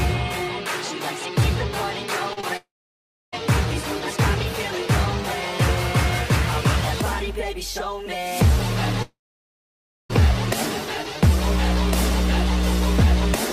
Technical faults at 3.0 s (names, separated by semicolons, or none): long network dropout